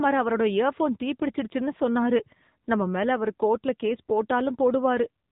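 From the first moment to the last, the speech has gone through an AMR narrowband mobile codec, the old 2G/3G phone coder. Nothing gets through above about 3.8 kHz, so it sounds boxy and phone-like, and the voice has that plainly audible buzzy, synthetic edge you get when a vocal-tract model is rebuilt from only a few pulses per frame. The amount of damage fits a low bitrate, somewhere around 8 kbps.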